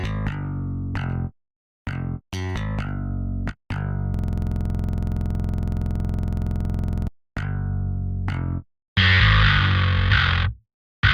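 From 4.14 to 7.08 s, a system hang loop occurs: the system stalled while the audio hardware kept replaying one ring buffer. A 46.4 ms slice, which fits a 2048-sample buffer, repeats dozens of times, producing a rattling buzz-stutter at 21.5 Hz.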